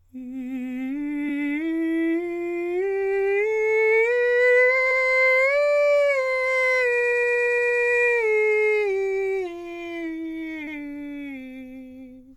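At 1.28–1.30, 4.90–4.99 and 10.66–10.78 s, repeated frames make the music stutter: compressed blocks of 23, 93 and 116 ms play twice. At 6.99–7.80 s, a 116 ms block loops eight times. The waveform and spectrogram show identical copied segments.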